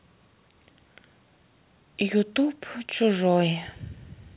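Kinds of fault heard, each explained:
No faults heard in this speech.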